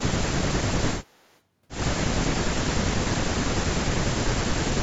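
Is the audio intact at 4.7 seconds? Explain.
Yes, at 4.7 seconds the speech plays through intact, with no dropout, click or other fault to be heard at that moment.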